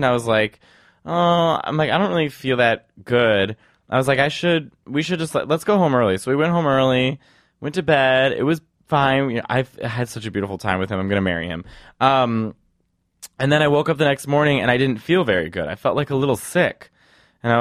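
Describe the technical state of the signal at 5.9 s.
At 5.9 s the speech signal is intact, with no audible dropout, distortion or other technical fault.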